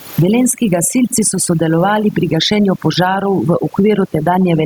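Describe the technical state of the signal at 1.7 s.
At 1.7 s, a noise reduction stage set far too aggressively is acting on the speech. It pushes individual frequency bands down or off wherever they sit near its noise estimate, and it takes the quieter parts of the voice along with the room noise. The background, which sits about 41 dB below the speech, collapses toward near silence with small twinkling specks. The voice has its softer detail stripped out. This overdone noise removal runs through the whole clip.

Gain pumping is also present here. The likely cause is input gain set much too high, with a fast limiter or compressor clamping down on each loud sound. Around 1.7 s, the gain swings by around 10 dB. Loud and soft parts are pulled toward the same level, so the speech sounds squashed. This pumping persists throughout the clip.

Underneath both is clock drift between sender and receiver. 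The sender's audio clock runs roughly 4 percent fast, so the receiver's jitter buffer keeps filling up. This drift holds for the whole clip.

To keep up with that drift, the receiver makes repeated timing corrections from 0.19 s to 4.60 s, and 1.7 s falls inside that stretch. It cuts out short pieces of audio, always in the same direction, at uneven intervals. The effect is an effective speed of 105 percent. Each edit is small and may pass as a slight hiccup.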